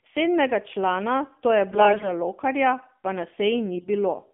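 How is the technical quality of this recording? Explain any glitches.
Technical quality is limited: this is phone-grade speech with two short garbled stretches.

AMR narrowband mobile codec, throughout: the band runs only from 200 Hz to 3.5 kHz, and the speech sounds buzzy and synthetic, which fits a low AMR-NB mode around 7.4 kbps.

AMR bit errors, 1.72 to 2.06 s just after "člana to je" and 3.75 to 3.89 s just after "pa na": corrupted frame bits misplace the excitation pulses, so the speech turns hoarse and gargly. About 7% and 10% of bits flipped respectively.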